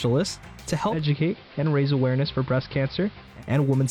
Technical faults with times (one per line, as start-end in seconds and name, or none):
0.82-3.44 digital radio blending to analogue